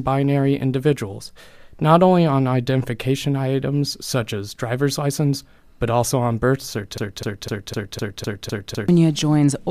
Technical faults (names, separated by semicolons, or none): broken-record loop